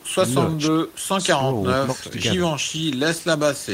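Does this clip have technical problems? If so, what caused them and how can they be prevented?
No, no technical faults here.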